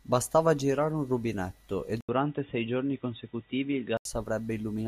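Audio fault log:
2.01–4.05 s, input switched to a poorer device: an 80 ms silence, then boxy speech with nothing above 3.8 kHz and faint new background noise at unchanged level, clearing at 4.05 s. That gap and the changed background, not just dulling, point to a likely device change rather than filtering.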